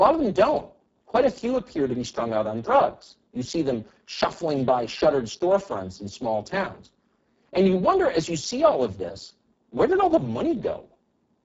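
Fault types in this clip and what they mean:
Speex codec: Heavy CELP coding starves the excitation, so the speech sounds hoarse, noisy and near-robotic, which fits a very low bitrate around 6 kbps. A spectrogram shows blurred harmonics, smeared noise-like fill above 4 kHz, and nothing above 7.7 kHz.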